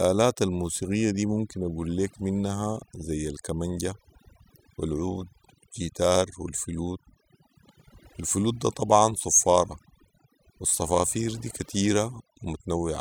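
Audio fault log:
Throughout: overdone noise removal. The noise reduction was applied far too aggressively to a noisy speech recording, so any frequency band sitting close to the estimated noise floor is pulled down hard or muted outright. Low-level parts of the speech fall below that threshold and vanish with the noise. The gaps between phrases drop to near silence scattered with twinkling specks.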